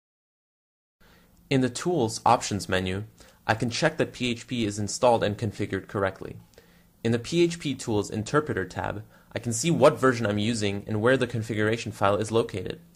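No technical faults can be heard anywhere in the clip. Close listening turns up nothing that would need to be flagged.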